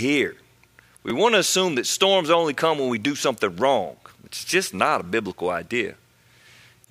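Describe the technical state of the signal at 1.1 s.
A brief buzzy click at 1.10 s, just before "want to assume that", is a repeated buffer: a roughly 5.33 ms slice, fitting a 256-sample buffer, plays two extra times when fresh audio arrives late.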